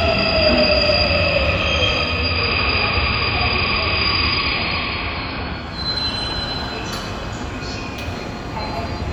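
From 1.97 to 5.93 s, the receiver lost its digital stream and blended to the AM analogue broadcast, a case of digital radio blending to analogue. Over a 481 ms crossfade, the treble dulls and faint hiss arrives, though the level holds steady.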